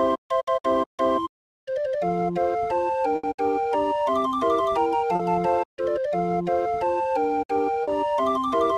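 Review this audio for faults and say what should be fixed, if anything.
At 3.15 to 3.26 s the sound stops moving forward and a continuation of the last moment fills in, decaying toward silence before the audio picks up again slightly further on. This is a burst of packet loss: about 80 ms of consecutive data arrived too late or not at all, so the receiver extended and faded what it last had, and that stretch of the original is gone for good. To prevent it, move the call to a steadier network path with less congestion, and enable forward error correction so short runs of lost packets can be rebuilt.

Two brief smears appear, at 5.15 to 5.22 s and at 7.83 to 7.90 s. Each is a momentary wobble where the sound briefly blurs and then snaps back into place. Both are short concealed packet loss. About 40 ms failed to reach the decoder in time, so the receiver patched the gap by continuing the preceding sound and blending back into the real signal. 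Anything short that fell inside those gaps is absent. To prevent this, enlarge the jitter buffer slightly and reduce network jitter so packets arrive within their playout window.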